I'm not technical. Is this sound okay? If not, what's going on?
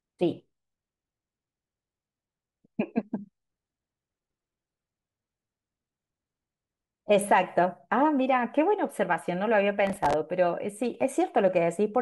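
No. Around 9.87 to 10.14 seconds, the computer handling the audio briefly fell behind. It works on the speech in tiny chunks, each a few thousandths of a second long, and over about a quarter of a second it missed the deadline for roughly twenty of them. Each missed chunk was filled with a bit of old audio, with abrupt edges, so the speech turns gritty and crackly there. This is called processor overload crackle.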